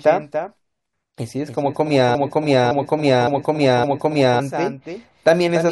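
A doubled audio track runs through the whole of this speech clip. A second full-band copy trails the original by roughly a third of a second, at about 10 dB lower and without any reverberant decay, likely because the signal was captured again through a slower path. A broken-record loop occupies 2.15 to 4.40 s, where a 0.56 s fragment repeats exactly four times back to back. The stream likely stalled and kept resending its last held piece, so the speech due in that span is lost.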